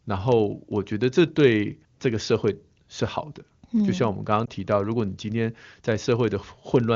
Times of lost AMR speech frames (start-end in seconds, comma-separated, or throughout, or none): 4.46-4.49